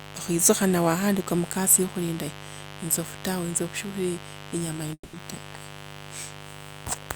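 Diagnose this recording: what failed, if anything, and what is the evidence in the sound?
Mains buzz from the analogue wiring runs throughout at about 15 dB below the speech. Switching spikes twice in every 50 Hz cycle show as stacked horizontal harmonic lines reaching several kHz.

A long network dropout, likely the cause, hits from 4.93 to 5.15 s. About 200 ms of concealment buzz or hiss fades into roughly 50 ms of flat waveform, and 200 ms of audio is lost.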